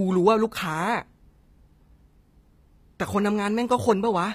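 Speech, and the treble sounds rebuilt the whole way through, with gritty, lispy s sounds and nothing above 15.5 kHz, likely HE-AAC compression at a low bitrate around 24 kbps.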